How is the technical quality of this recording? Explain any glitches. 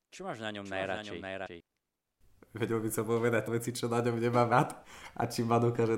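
The recording has two kinds of glitch: a doubled passage near the start and three brief skips later on.

From 0.65 to 1.60 s, just after "máš na ňom", a doubled audio track sounds: a dry echo about 5 dB quieter, roughly half a second late, likely from a second, slower capture path.

Compressed frames skipped at 1.45–1.47 s, at 3.46 s before "veci čo na ňom", and at 4.51 s after "čo na ňom nemám" produce short glitches. Whole 26.1 ms frames were not played, jumping ahead roughly 150, 200 and 70 ms.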